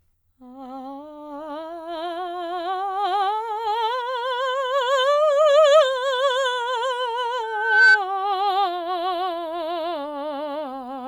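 A music clip with loudspeaker feedback squeal from 7.43 to 7.99 s. A steady 1.5 kHz tone builds over roughly 0.4 s to about 10 dB above the music. That single pitched, swelling howl marks a mic-to-speaker loop, not a hum or whistle.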